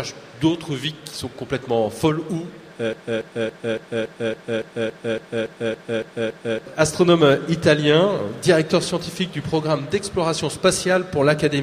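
A stalled player or stream likely kept resending its last fragment, causing a broken-record loop: from 2.93 to 6.66 s, a 281 ms piece repeats exactly thirteen times, replacing the missing audio.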